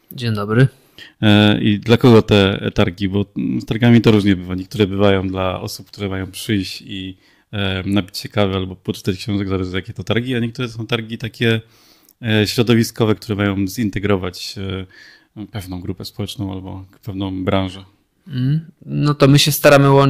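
Hard clipping shows up eight times in this speech: 0.60–0.63, 1.28–2.84, 3.83–4.32, 4.80–5.14, 8.41–8.43, 10.12–10.17, 12.43–13.12 and 19.22–20.05 s. The level runs past what the chain can pass, so the peaks get sliced flat and spray harmonics high up the spectrum. The mild ones, about 0 to 3 dB over, are just crackle on peaks. At 1.28, 3.83 and especially 19.22 s, pushed about 8, 7 and 12 dB over, it turns into a harsh fuzz.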